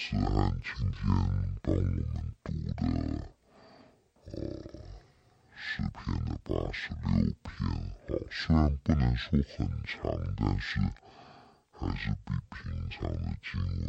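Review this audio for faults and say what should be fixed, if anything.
The speech runs at half speed and a full octave low, 12 semitones down, from start to finish, and there's a faint mirrored copy up in the top half of the spectrum. That's stereo read as mono: the interleaved left and right samples got played back one after another as a single channel, doubling the length. To prevent it, make sure the reader takes the channel count from the file header and deinterleaves stereo before treating it as mono.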